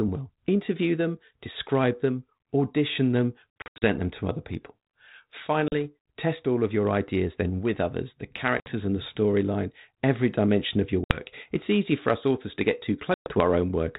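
Packet loss on an ADPCM call cuts hard-edged holes at 3.6, 5.68, 8.6, 11.04 and 13.14 s. The first, after "describe them audition them", is scattered short gaps. Each time, the decoder's predictor loses step. Speech returns slightly distorted, then settles.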